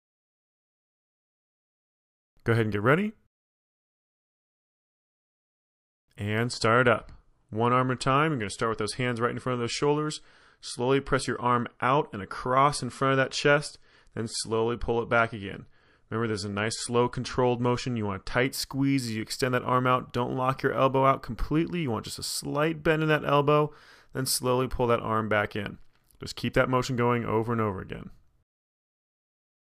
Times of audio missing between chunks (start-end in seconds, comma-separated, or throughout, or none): none